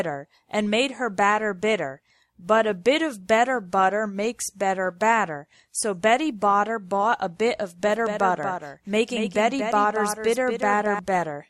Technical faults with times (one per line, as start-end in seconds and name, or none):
7.85-10.99 doubled audio track